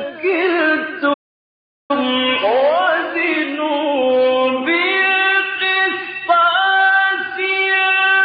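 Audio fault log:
1.13–1.91 s, playback stall: the sound stops abruptly in mid-flow and the output goes completely silent for about 0.76 s before the sound returns. The likely cause is the player running out of buffered data or its thread being blocked until it recovered.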